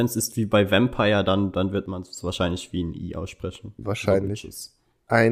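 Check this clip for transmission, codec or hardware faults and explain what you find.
One fault is present. From 1.86 to 2.17 s, between "dann dann wird" and "wahrscheinlich wie ein I", the speech level falls abruptly by about 6 dB for roughly 0.3 s, then returns. This is likely one channel drops out: with one stereo side missing, the mono sum carries only half the shared signal.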